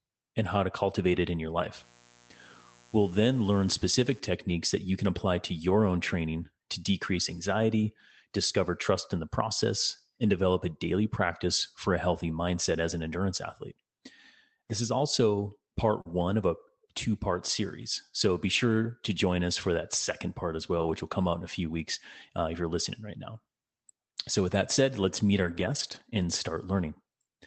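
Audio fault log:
1.75–4.20 s, mains buzz: a raspy 60 Hz buzz, around 30 dB below the speech, sits under the sound. Sharp switching spikes twice per mains cycle add a dense comb of harmonics reaching several kHz, which sets it apart from a smooth, low, pure hum.
4.49, 5.69, 16.05–16.11, 17.81–17.83, 20.79–20.93 and 25.43–26.01 s, lost packet rebuilt from error correction: each stretch, 20 ms at 4.49, 5.69 and 17.81 s (just after "of a two part"), 40 ms at 16.05, 80 ms at 20.79 s between "that second part as" and "will come out in", and 300 ms at 25.43 s, turns briefly rougher and noisier with no gap. The decoder played a low-bitrate copy carried in the next packet, so the real sound continues, only coarser, unlike a concealment guess.
16.01–16.07 s, short concealed packet loss: between "is also part" and "of a two part", about 40 ms never arrived. The receiver filled about 37 ms by extending the preceding sound and then blending back in, which gives a brief smear or wobble. 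Because this is an extrapolated guess and not a degraded copy, it smears where error correction only roughens.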